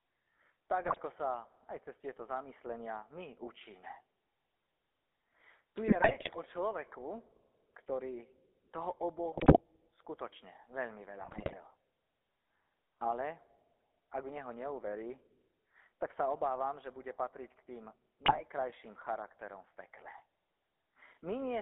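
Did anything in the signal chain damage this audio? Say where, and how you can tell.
Yes. GSM full-rate codec damage runs through the whole clip, at the codec stage. The speech is confined to roughly 300 Hz to 3.6 kHz and has a buzzy, gravelly roughness. That comes from a vocal-tract model excited by sparse, regularly spaced pulses, which fits a 13 kbps full-rate coder.

GSM bit errors, at the network stage, strike at 0.84–1.00 s, 5.88–6.35 s (just before "o človeku"), 9.32–9.61 s, 11.20–11.55 s and 18.26–18.41 s. The speech breaks into squawks, pops and gargling. Corrupted filter, pitch or gain values distort the spectrum or level frame by frame.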